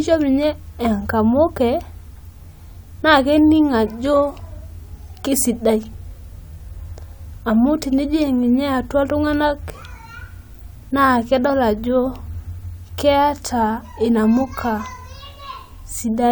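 No technical faults can be heard in this speech recording.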